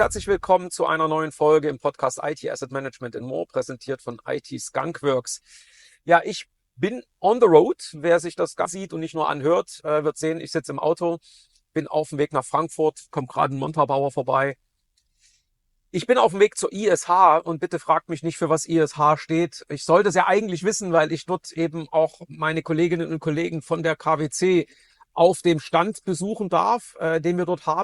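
A skip ahead at 8.65 to 8.67 s cuts about a second of audio: that stretch was dropped while later material was already queued, so playback jumps straight forward and the two sides join with no filled gap between them. A jitter buffer speed-up follows from 8.75 to 12.21 s, with the audio running at 106% speed and unchanged pitch. The receiver held more buffered audio than its target and trimmed short pitch-period slices repeatedly, removing around a fifth of a second and leaving that passage sounding slightly hurried.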